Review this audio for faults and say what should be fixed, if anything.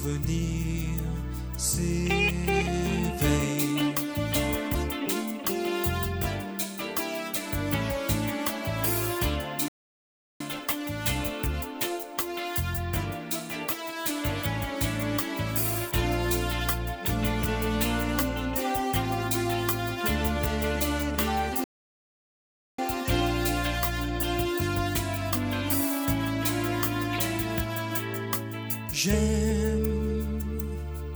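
Two playback stalls, at 9.68–10.41 s and 21.64–22.79 s, where the sound cuts to silence for 0.72 s and 1.14 s, likely from the player starving or blocking. A bigger playback buffer and keeping decoding off the output thread should stop it.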